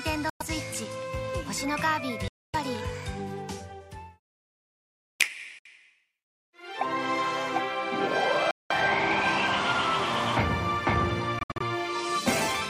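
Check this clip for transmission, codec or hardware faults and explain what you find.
There are five short holes where the sound cuts out, most likely Bluetooth dropouts. They fall at 0.30–0.42 s, 2.28–2.55 s (the longest, about a quarter second), 5.59–5.66 s, 8.51–8.72 s, and 11.39–11.61 s, where the last is a cluster of smaller gaps with the longest run 64 ms. The gaps start and stop abruptly or with a fade of a few milliseconds, and when the sound returns it has moved on as if it kept playing. Packets missed their deadline at the headphones and were dropped, and the lost spans fit whole blocks of roughly 21 ms each.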